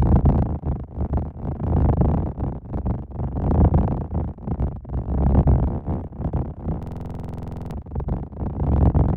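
From 6.83 s to 7.71 s the sound turns into a rapid, mechanical rattle. The same 46 ms fragment repeats 19 times at 21.5 Hz, a stutter just at the edge of becoming a buzz. This is a system hang loop: the machine or its driver stalled while the audio hardware kept replaying one ring buffer, which fits a 2048-sample buffer. When playback resumes, about a second of the original audio is gone.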